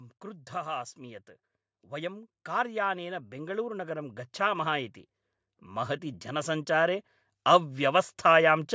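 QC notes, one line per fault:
1.9–4.93 s, automatic gain rising: the gain control judged the input too quiet and lifted it by about 7 dB, so speech and background swell together.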